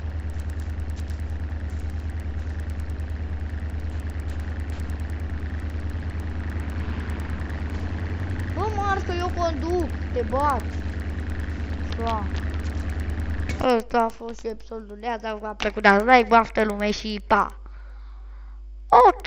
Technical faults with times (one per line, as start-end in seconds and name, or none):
0.00-19.27 resampler restarted on every block